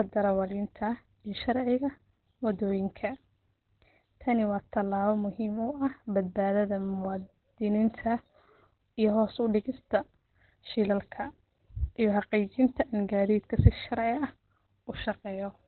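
Throughout the clip, the speech has likely passed through Opus compression at a very low rate, one that fits about 12 kbps, forcing the encoder into its narrowband SILK speech mode. Nothing survives above 4.2 kHz, leaving the voice heavily muffled, hoarse and boxy.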